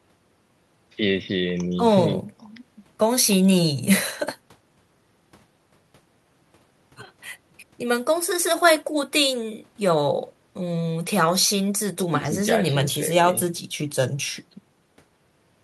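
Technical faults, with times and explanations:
No technical faults are audible in this recording.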